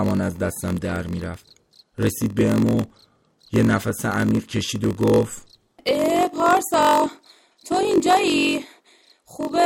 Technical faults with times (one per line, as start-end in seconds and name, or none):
0.00-9.65 block size mismatch (padded)